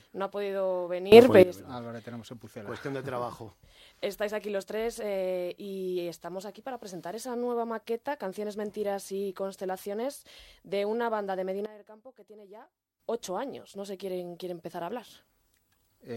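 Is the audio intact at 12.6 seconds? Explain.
No. At 12.6 seconds the audio sits inside a sudden gain jump that runs from 11.66 to 13.0 s. The likely cause is a digital gain change applied from one sample to the next with no ramp, cutting the level by about 17 dB. The sound and its background noise drop together in an instant, stay noticeably quieter for that stretch, then step back up just as abruptly at 13.0 s.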